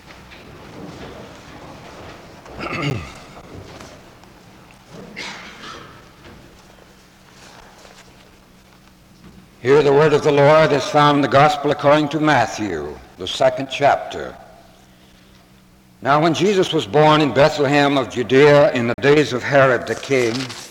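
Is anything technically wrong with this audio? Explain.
Yes. Two blocks of digital silence: at 2.9 s a 10 ms gap, and from 18.94 to 18.98 s a 40 ms gap. Samples drop abruptly to silence and return without fades. The first sounds like a tick; the longer one is a brief audible hole.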